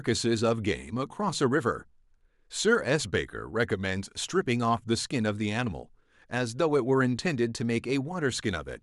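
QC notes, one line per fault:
No fault found in this speech clip.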